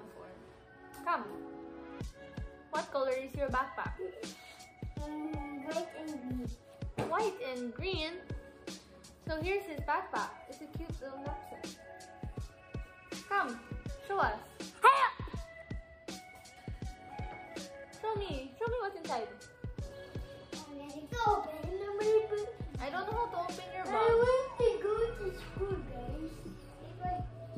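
Nothing in the audio stood out as a technical problem on listening.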